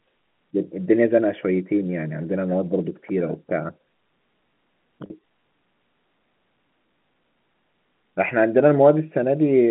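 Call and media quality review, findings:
Packet loss with pitch repetition at 5.06–5.10 s in the speech: 40 ms gap, consistent with two 20 ms packets dropped. Receiver concealment repeats the last pitch period, giving a brief held, buzzy tone. Telephone band (G.711 A-law, 150 Hz–3.5 kHz) audible throughout.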